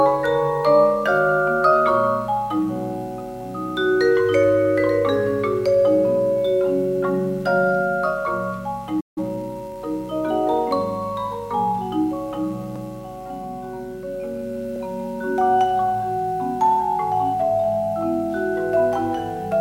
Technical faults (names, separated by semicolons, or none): playback stall; time-compressed catch-up